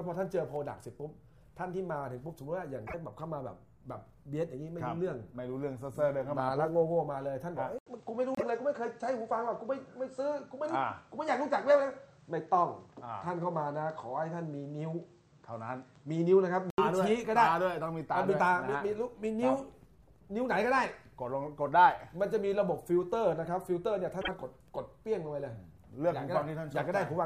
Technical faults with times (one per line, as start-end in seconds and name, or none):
2.86-2.94 broken MP3 bit reservoir
7.78-16.78 input switched to a poorer device
8.35-8.43 broken MP3 bit reservoir
24.20-24.29 broken MP3 bit reservoir